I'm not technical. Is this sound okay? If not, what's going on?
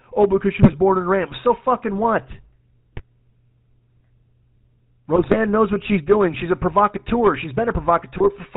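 No. The whole recording has a buzzy, gravelly roughness, and the voice sounds thin and boxy, with no crispness at the top. This is the sound of the GSM full-rate codec, the speech compression used by early mobile phones. It rebuilds the voice from a simplified model of the mouth and throat driven by a pulse pattern, and it discards everything above about 4 kHz. That combination is where the rasp and the dullness come from.

On top of that, there are four short bursts of squawking, popping or gargling. These are GSM bit errors, where damaged data from a weak phone connection reached the decoder. It then rebuilt a few moments of sound with the wrong tone or loudness. They occur at 0.62 to 0.75 seconds, between "because she" and "born in"; at 2.93 to 3.02 seconds, right after "fucking what"; at 5.16 to 5.37 seconds, just before "knows what she's doing"; and at 8.18 to 8.30 seconds, near the end.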